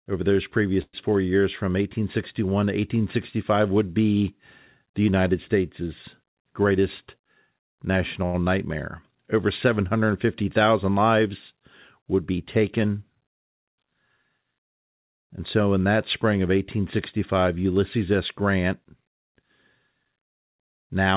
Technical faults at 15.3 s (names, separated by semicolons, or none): jitter buffer speed-up